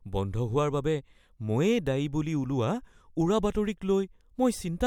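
No technical faults are audible anywhere in the recording.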